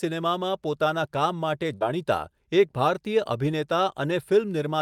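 It's a short speech clip with one burst of packet loss at about 1.75 to 1.84 s. For roughly 53 ms the receiver stretches the last bit of sound and fades it down, then picks up again with about 60 ms of the original speech simply gone.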